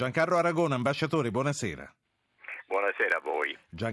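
Throughout the speech, a resampler restarted on every block converts 48 kHz to 24 kHz in 20 ms pieces without carrying history across edges. Each boundary gets a small discontinuity, producing a 50 Hz buzz that sits under the speech and disappears in pauses.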